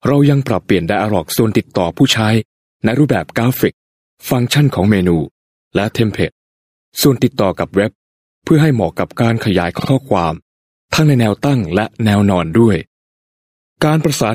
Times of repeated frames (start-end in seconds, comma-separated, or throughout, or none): 9.78-9.89